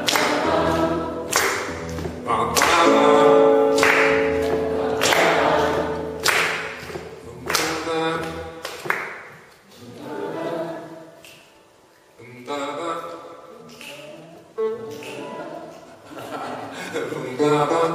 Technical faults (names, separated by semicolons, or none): none